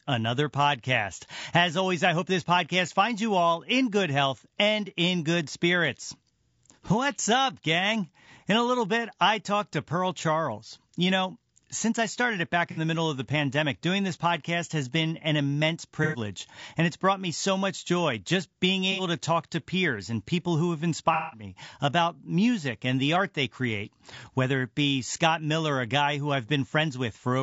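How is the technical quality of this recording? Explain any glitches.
The recording is speech with a steady compression roughness throughout, plus four short dropouts where the audio smears over.

The whole clip sounds rough and grainy, with noise filling the gaps between the voice's harmonics and a thin, synthetic top end. That's likely low-delay AAC compression (AAC-ELD) at a low bitrate, around 32 kbps. Its short frames resolve pitch detail poorly and leave few bits to spare.

The glitches are AAC frame loss with concealment, at 12.71–12.79 s (after "I started it back", before "the middle of the"), at 16.04–16.18 s, at 18.92–19.01 s (after "much joy just being", before "to talk to peers") and at 21.14–21.43 s (after "and people who have", before "about music and the"). Each time the decoder patched the missing stretch from the last good spectrum, so you get a smeared, noisy, phasey blur. 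The longest, about 180 ms at 21.14 s, fits several consecutive frames going missing.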